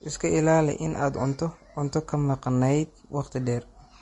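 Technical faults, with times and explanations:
Throughout: Vorbis compression. The encoder was likely run at a low bitrate, around 33 kbps by the sound of it, so it discards everything above 10.6 kHz and quantises the treble coarsely, leaving the speech plainly hissy and grainy, with roughened tones and blurred attacks.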